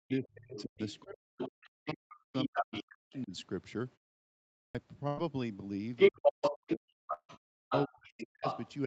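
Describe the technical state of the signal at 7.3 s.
At 7.3 s the signal sits at the end of a long network dropout (7.13 to 7.31 s). The lost audio was likely concealed by stretching the last sound into a fading buzz, then about 60 ms of silence before audio resumes, unlike a clean cut. Underneath, the other side's voice leaking through (5.96 to 8.73 s) is somewhat louder than the talker, a second voice likely from uncancelled loudspeaker echo. At the same time, speech suppressed in double talk (6.10 to 8.86 s) likely pushes the talker's own voice down very deeply, so the talker is turned down while the other side's voice stays prominent.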